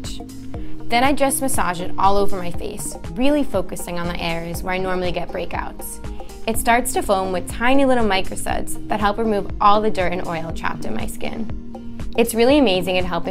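Right around 7.03 s a couple of compressed frames get skipped, so the audio jumps ahead roughly 50 ms.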